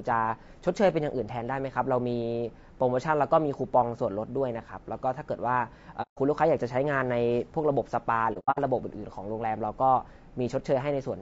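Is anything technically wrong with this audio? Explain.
Yes. Low-delay AAC compression runs through the whole speech clip, likely AAC-ELD at a bitrate around 32 kbps. Its short frames resolve pitch harmonics poorly, so at this low rate the damage is plainly audible: rough, grainy voicing with noise between harmonics and a thin top band.

AAC frame loss with muting appears at 6.02–6.19 s and 8.33–8.59 s. The decoder zeroes the missing spectrum, and overlapping windows fade the sound out and back in. The first gap is 150 ms, which fits about five lost frames. The second loses 180 ms scattered over 240 ms, with the longest hole about a tenth of a second.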